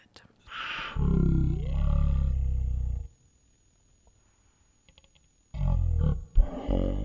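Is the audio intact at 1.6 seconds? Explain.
No. A wrong sample rate fault runs from 0.47 s to the end, so it covers 1.6 s. The speech plays at one third speed and about 19 semitones lower, which fits 48 kHz audio played at 16 kHz without conversion, making the voice sound slow and deep.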